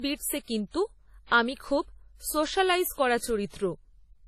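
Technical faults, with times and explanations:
Throughout, transcoding between lossy codecs: the speech was likely encoded at low bitrate, around 32 kbit/s WMA, then re-encoded as AAC-LC near 48 kbit/s. The second encoder wastes bits reproducing the first one's artefacts and adds its own, so both artefact types overlap, with nothing above 14 kHz.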